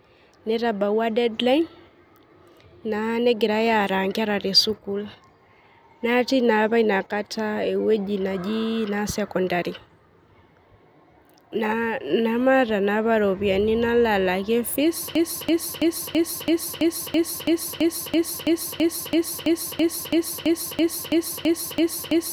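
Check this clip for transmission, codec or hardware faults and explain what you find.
One fault is present: a broken-record loop running from 15.15 s to the end of the clip. Just after "nalo alakie fees", a 0.33 s fragment of speech repeats exactly, back to back, 22 times, and nothing new is heard after that point. The likely cause is a stalled player, encoder or stream that kept resending its last buffered piece, so the audio that belonged there is lost. On a waveform or spectrogram, the final seven seconds show an identical block tiled at a strict 331 ms period.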